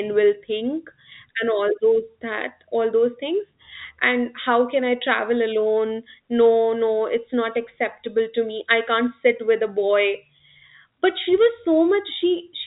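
Nothing is technically wrong with this speech recording: it carries the narrow band of ordinary G.711 telephone coding, with nothing above 3.8 kHz, which is how that format is meant to sound.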